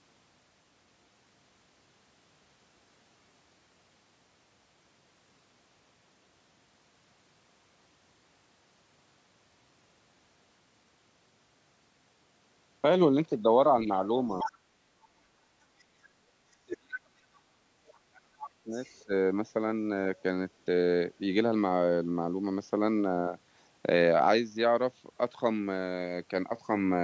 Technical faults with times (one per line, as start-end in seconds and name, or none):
14.39-14.56 other side's voice leaking through
14.43-14.63 speech suppressed in double talk
15.02-15.08 other side's voice leaking through
15.87-17.70 speech suppressed in double talk
17.87-17.98 other side's voice leaking through
18.07-19.13 speech suppressed in double talk
18.84-19.02 other side's voice leaking through
20.17-20.22 other side's voice leaking through